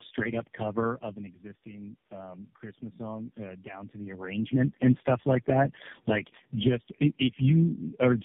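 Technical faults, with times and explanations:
Throughout, tandem speech coding: the speech sounds rough, muffled and warbly, with nothing above 3.5 kHz. The signal appears to have been decoded and re-encoded at several network borders, about four low-rate speech codecs in a row, likely ending in something like AMR-NB. Each coder models the distortions left by the one before as if they were speech, so the errors compound into a coarser, smeared sound than any single link would produce.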